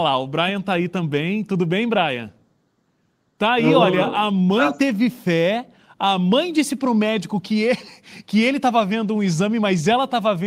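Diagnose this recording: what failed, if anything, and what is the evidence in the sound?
Nothing failed; no faults heard.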